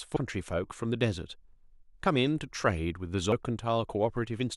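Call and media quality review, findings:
Damaged data in compressed stream at 0.16 s and 3.32 s: corrupt frames, decoder loses sync and hunts for next header, producing brief glitches in the speech.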